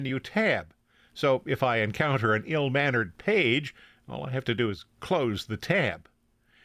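Nothing goes wrong anywhere in this bit of speech, so there's simply no technical fault to point to.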